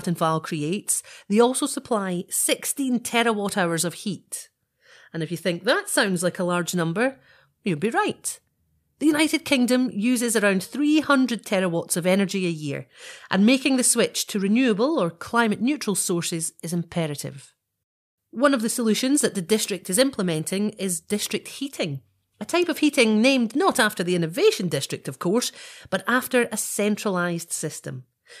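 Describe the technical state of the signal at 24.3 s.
At 24.3 s the speech signal is intact, with no audible dropout, distortion, clipping or other fault at that moment.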